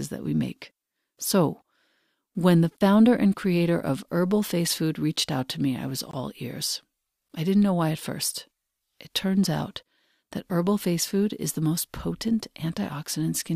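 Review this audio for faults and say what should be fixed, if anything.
Blocks of digital silence cut the speech at 5.16 s, before "out to me I", and at 7.29 s, before "I didn't know why". Each gap lasts about 11 ms, which fits a 512-sample buffer. A longer one, about 21 ms, falls from 6.11 to 6.13 s, between "to me I was" and "ears I didn't know". That length fits 1024 samples, two such buffers. The audio drops abruptly to silence and back with no fade. Prevent this by giving the audio thread a larger buffer or more processing headroom so it never underruns.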